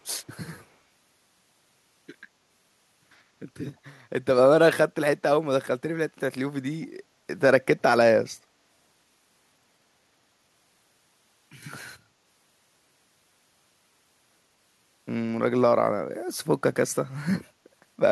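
From 6.82 to 6.86 s a brief echo leak appears: a faint copy of the speech, roughly 40 dB down, trailing 142 ms behind, likely from a far-end loudspeaker whose echo canceller let residue through. On a spectrogram it shows as a weak, smeared repeat of the preceding harmonics.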